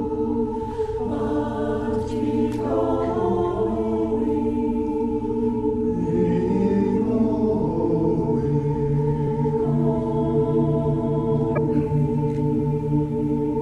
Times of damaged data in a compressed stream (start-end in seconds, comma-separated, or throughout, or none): 9.24-9.27, 11.53-11.58